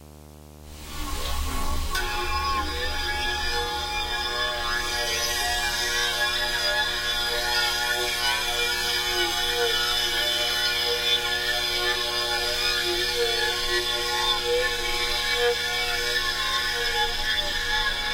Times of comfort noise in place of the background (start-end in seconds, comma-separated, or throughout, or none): none